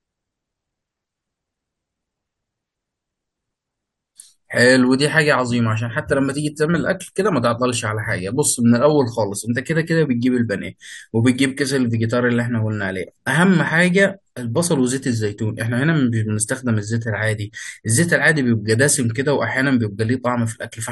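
A speech recording with nothing technically wrong with it.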